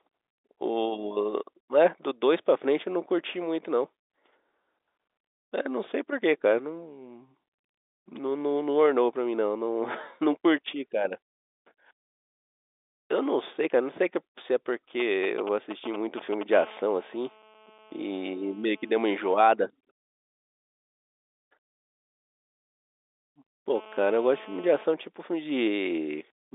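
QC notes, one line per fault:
15.00–16.43 s, GSM signalling bursts: a galloping dit-dit-dit of short 217 Hz buzzes, roughly 10 dB below the speech. A nearby 2G phone sends brief groups of radio bursts while signalling, and the audio circuit rectifies each group into an audible pulse train repeating at 217 Hz.
16.53–19.46 s and 23.75–24.84 s, GSM phone buzz: a hard, raspy 217 Hz buzz rich in harmonics, about 24 dB and about 21 dB below the speech respectively. It is steady and unrelated to the speech, because a phone in a call transmits continuously at 217 bursts per second and the circuit rectifies every burst.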